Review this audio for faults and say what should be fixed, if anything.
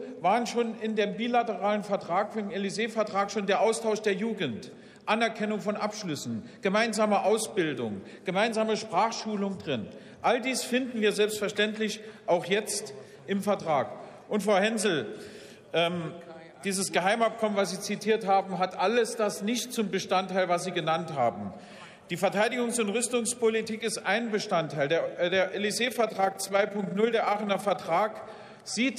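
Overlap-add ripple runs from 25.84 to 27.81 s. The level swells and dips by about 6 dB around 30 times a second, giving the sound a rough flutter like a fast tremolo. The audio was processed in windowed frames and rejoined with an overlap whose windows do not add up to a steady gain, so each frame boundary leaves a loudness bump. To prevent it, pair the window shape with a hop size that meets the constant-overlap-add condition, or normalise by the summed window.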